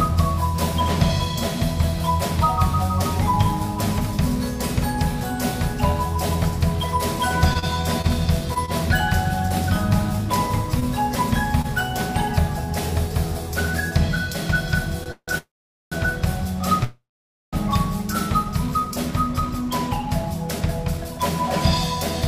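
Scattered short gaps run from 7.53 to 11.66 s. There are roughly seven of them, the longest around 30 ms. Each hole is patched by extending the preceding sound, covering about 4% of that stretch. About 40 ms of audio is lost. A jitter buffer speed-up follows from 11.94 to 14.35 s at 102% speed, trimming roughly 50 ms. A second one, from 19.40 to 21.19 s, runs at 105% and trims roughly 100 ms. In both, pitch stays put while small pitch-period slices are cut to shrink the backlog. A short stall from a late packet comes at 15.03 to 15.08 s. The last sound is stretched for 24 ms until the packet shows up. Nothing is dropped, but the delay grows by 24 ms. Three call audio freezes follow. In each, the last sound is prolonged, then fades into silence, and the audio picks up exactly where it stopped. The first runs 15.12 to 15.30 s (159 ms, 70 ms silent). The second runs 15.38 to 15.94 s (539 ms, 450 ms silent). 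The third runs 16.84 to 17.55 s (691 ms, 520 ms silent). The likely cause is packets held up in transit, draining the jitter buffer.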